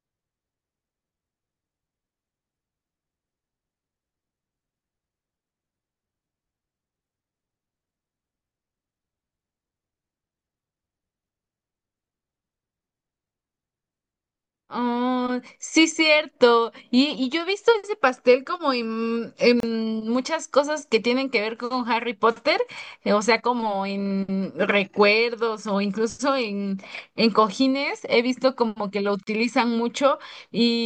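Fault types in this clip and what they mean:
Gap at a join of encoded pieces: the speech drops out twice for a brief hole of silence, about 30 ms at 19.60 s and about 37 ms at 29.23 s, with edges smeared by the codec, then resumes exactly where it stopped. The audio was encoded in separate pieces and joined untrimmed, so each encoder's start-up delay and last-frame padding remain as silence at the seam.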